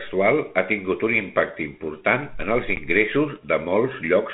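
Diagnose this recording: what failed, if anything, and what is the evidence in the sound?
The network stage failed: packet loss on an ADPCM call. Just after "impacte important en els", at 2.76 to 2.78 s, about 10 ms of the speech drops to a hard-edged silence, which fits roughly one lost packet. The 32 kbit/s G.726 link carries the speech with light coding noise. What separates this from a plain buffer dropout is the aftermath. The decoder's adaptive predictor and step size no longer match the sender's, so the speech returns slightly distorted and settles over the next few tens of milliseconds.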